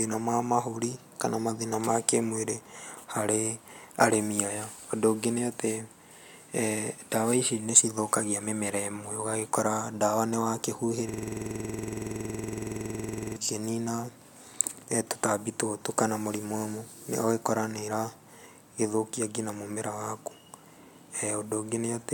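At 11.09–13.36 s a system hang loop replays one 46.44 ms buffer as a 21.5 Hz buzz, seen as identical waveform blocks and spectrogram stripes.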